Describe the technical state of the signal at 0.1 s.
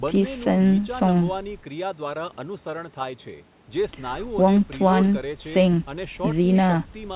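At 0.1 s the speech is intact, with no fault present, and only the telephone-style band limit of the call path is audible, with nothing above 4 kHz.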